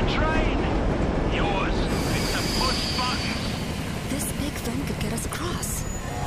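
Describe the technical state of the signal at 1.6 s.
At 1.6 s the signal is intact, with no audible technical fault at that moment.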